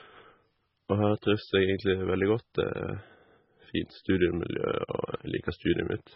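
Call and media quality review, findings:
MP3 compression, throughout the speech: treble absent above 5.6 kHz, watery swirling texture, metallic chirps on s sounds, smeared attacks. Likely an MP3 encoder starved of bits, which fits a very low rate near 16 kbps. The encoder cuts the top band and zeroes weak spectral lines that flicker between frames.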